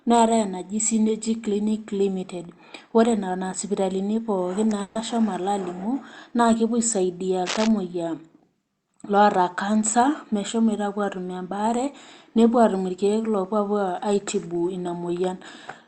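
Burst of packet loss, 4.81 to 4.97 s: a run of roughly 140 ms of audio never arrived in time to be played, so the receiver stretched the last bit of speech it had and let it fade through the gap. The result is a brief fading tail instead of a clean cut, and when the speech picks up again the 140 ms in between is simply gone, with nothing silent marking the join.

Cable scratch noise, 7.46 to 7.71 s: for about a quarter of a second a dense, irregular crackle rides over the speech, close in level to the voice itself and not far below it. The rapid, uneven rustle is the signature of contact resistance jumping around, most likely a worn cable, connector or control being moved. Because it passed through a call codec whose bandwidth tops out near 8 kHz, the scratch carries nothing above that.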